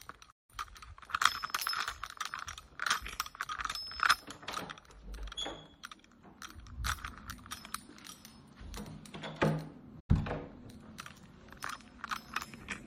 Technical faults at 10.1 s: digital broadcast dropout

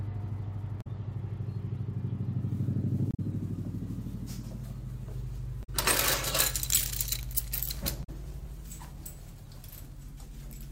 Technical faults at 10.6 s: none

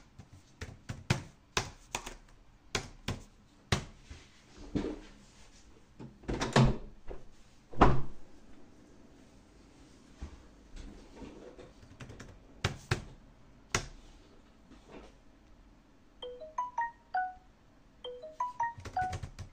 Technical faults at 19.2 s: none

